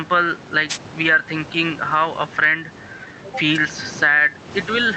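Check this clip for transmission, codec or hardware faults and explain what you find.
Two faults stand out in this speech clip, one running the whole way through and one brief hit near the start.

Gain pumping runs for the whole clip. The gain swings by roughly 10 dB. That's likely the input gain set far too hot with a fast limiter clamping it down, so everything sounds squashed.

A wireless microphone noise hit lands from 0.69 to 0.78 s as a quick swish of static. That's the FM radio link fading as reflections cancel, letting receiver noise surge up.

The steady room noise sits about 30 dB below the speech, and the top end stops around 8 kHz, which fits an Opus call path at roughly 32 kbps.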